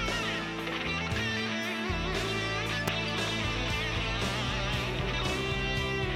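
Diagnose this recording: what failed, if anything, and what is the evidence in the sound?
An electrical switching spike appears at 2.88 s: a sharp, brief transient, over in a few milliseconds and peaking at around -10 dBFS, sitting on top of the sound rather than replacing it. This points to the analogue wiring stage. The likely cause is a nearby switch, motor or static discharge producing a brief arc whose pulse was coupled into the audio line and added to the signal before conversion.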